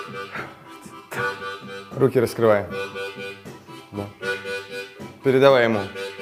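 Nothing here trips the ear at all, since there's no audible technical fault anywhere in the clip.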